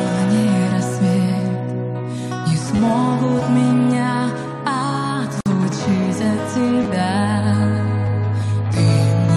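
A repeated buffer fault at 2.76 to 2.79 s happens because fresh audio failed to reach the output in time, so the device replayed its last block three extra times. Each repeat is about 10 ms long, which points to a 10 ms buffer. The looped block joins itself abruptly and is heard as a quick buzzing stutter, and around 30 ms of the real signal is skipped.

A gap at a join of encoded pieces opens at 5.41 to 5.46 s. Two separately encoded segments were spliced without trimming the encoder's start-up delay and the padding on the final frame. The result is a 53 ms hole of silence in otherwise continuous sound. Its edges are smeared by the codec, so the truly silent part is shorter, and the audio resumes exactly where it left off.

The repeated buffer fault returns at 6.83 to 6.85 s, with the same 10 ms block played two extra times and roughly 20 ms of audio lost. It comes back once more at 8.06 s as a single extra play that drops about 10 ms.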